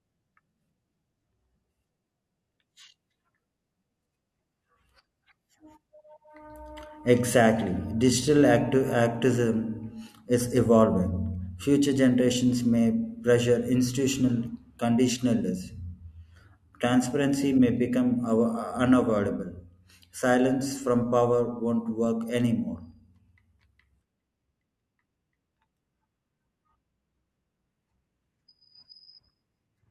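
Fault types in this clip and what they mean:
Nothing stood out on listening to this speech recording.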